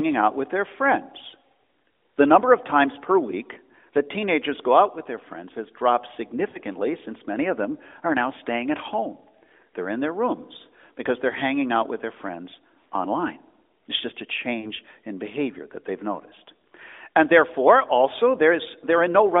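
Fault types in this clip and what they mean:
Lost AMR speech frames: Radio errors corrupted frames, so the decoder filled each gap by repeating its last good pitch and vocal tract settings at falling gain. It happens twice, at 6.50 to 6.58 s and 14.60 to 14.71 s. Each gap lasts about 40 ms, which fits two lost 20 ms frames. The sound briefly smears and dips, then returns weak or rough for a moment. The narrowband line tops out near 3.6 kHz.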